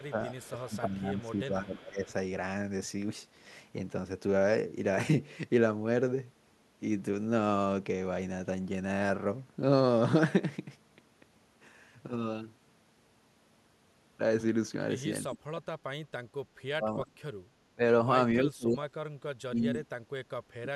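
Echo leak, from 0.0 to 0.77 s: a faint copy of the speech returns about 330 ms late, roughly 30 dB below the voice. The likely cause is a far-end loudspeaker whose echo canceller let part of its microphone pickup escape back into the call.

Speech suppressed in double talk, from 0.0 to 2.09 s and again at 15.24–15.73, 16.69–17.82, 18.41–18.91, 19.48–19.89 and 20.49–20.69 s: the voice dips or breaks up, falling by about 15 dB at first and by 20 to 35 dB later. This is likely an echo canceller that could not separate overlapping talkers and ducked both.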